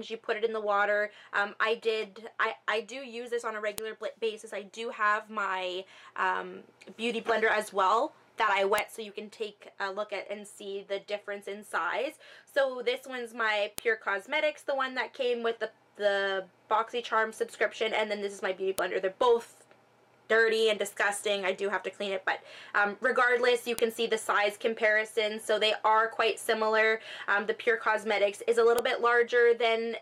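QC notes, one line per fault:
3.78, 8.78, 13.78, 18.79, 23.79 and 28.79 s, file header played as audio: there's a sharp, loud snap every 5 s, and it lands the same way regardless of what the sound around it is doing. Each one is tiny, about a millisecond or less. That's the signature of 5-second WAV pieces stitched or streamed together with their headers left in, so those few dozen bytes of metadata get decoded as sample values and come out as a click.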